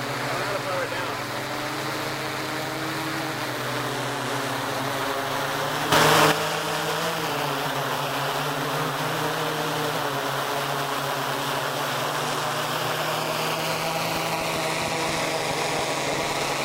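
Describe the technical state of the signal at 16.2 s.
At 16.2 s the audio sits inside a train of clicks running from 14.16 to 16.44 s: around fifteen similar pops at an uneven 6.2 per second, peaking about 10 dB above the signal, likely from interference injecting pulses. A spectrogram shows thin full-band vertical lines; the waveform shows sharp spikes.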